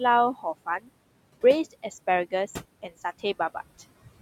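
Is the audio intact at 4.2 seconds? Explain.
No. At 4.2 seconds the noise suppressor artifacts are present, as they are for the whole clip. The suppressor judges which frequency bands hold steady noise and pulls them down, frame by frame, by about 20 dB. The room noise sits about 16 dB below the speech. So the background drops away in the gaps between words. It then swells back up under the speech, because those bands must stay open for the voice.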